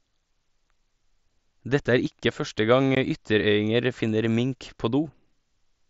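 Unconcealed Bluetooth headset packet loss at 2.95 s: about 15 ms of the mSBC link's speech, likely a couple of packets, drops to silence with abrupt edges.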